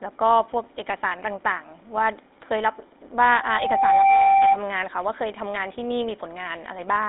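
Speech that sounds buzzy and gravelly from start to finish, confined to a narrow 250 Hz to 3.7 kHz telephone band with nothing above 3.8 kHz. The GSM full-rate codec, which fits 13 kbps, rebuilds the voice from a vocal-tract model and coarse pulse excitation.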